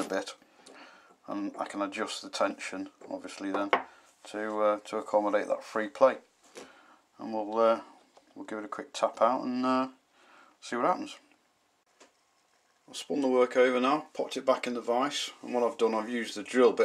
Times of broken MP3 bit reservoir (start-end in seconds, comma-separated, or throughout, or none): none